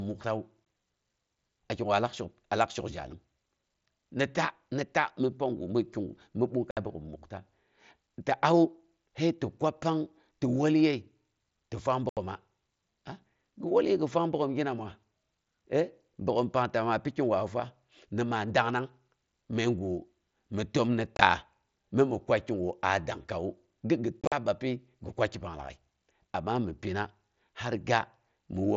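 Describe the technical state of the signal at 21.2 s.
Right after "mi təm ni", from about 21.15 to 21.22 s, there's unconcealed Bluetooth headset packet loss. Voice packets between headset and phone went missing and nothing patched the gaps, so you get roughly 37.5 ms of holes scattered over 60 ms, the longest about 22.5 ms. That pattern fits a few dropped 7.5 ms mSBC frames. It sounds like a quick, choppy stutter with hard edges.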